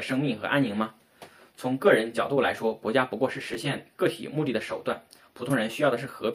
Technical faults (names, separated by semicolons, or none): chunks out of order